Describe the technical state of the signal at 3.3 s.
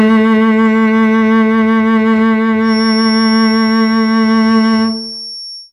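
A loudspeaker-to-microphone loop is likely held right at the edge of feedback, so at 3.3 s the music carries a feedback whistle that began at 2.59 s and lasts to the end at 5.73 s. The loop sustains a single tone near 5.5 kHz without letting it build into a howl. It sits about 15 dB below the music as a thin whistle at one pitch behind it, swelling and fading slowly in level.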